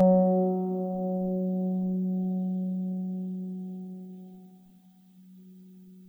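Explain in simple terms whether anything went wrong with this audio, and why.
Channel delay (comb filtering) runs throughout: one side lags about 5 ms, so combining them cancels evenly spaced frequencies from around 100 Hz up, making the music sound hollow.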